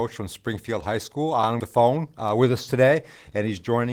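No technical faults are audible.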